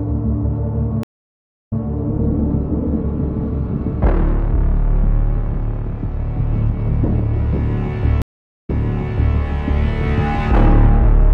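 Two stream reconnects interrupt the audio. From 1.03 to 1.82 s it drops to about 0.63 s of silence and resumes 0.16 s earlier than where it cut off. From 8.22 to 9.37 s there is about 0.42 s of silence, and playback picks up 0.73 s earlier, repeating that stretch. Each time the connection broke, the player went quiet, reconnected and started a fresh decoder mid-stream, and the server resent already-played material.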